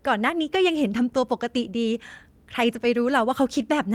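No technical faults are audible.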